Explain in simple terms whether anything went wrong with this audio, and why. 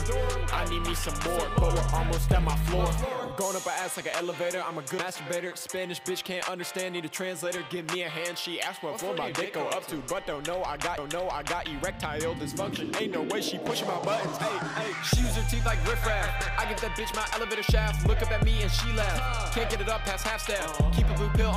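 A tiny tick and a sudden jump in the sound at 4.98 s and 10.97 s: CD skips, where the laser briefly lost its track and resumed elsewhere on the disc.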